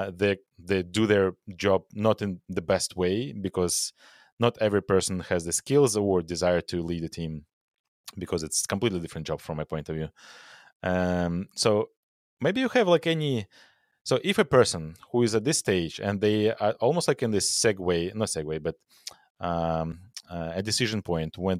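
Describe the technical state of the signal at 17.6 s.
At 17.57 s the speech has a repeated buffer. A tiny slice of about 1.45 ms, which fits a 64-sample buffer, plays three times when fresh audio arrives late. It sounds like a brief click or buzz, and the waveform shows identical short cycles with hard joins that appear as a vertical line on a spectrogram.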